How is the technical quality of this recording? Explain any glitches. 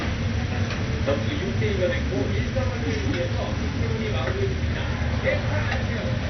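The quality is poor. Heavy MP2 compression runs through the whole recording. Nothing survives above 6.2 kHz. Switched-off upper bands and coarse quantisation likely left a dull, gurgling, granular sound, consistent with a low rate near 48 kbps.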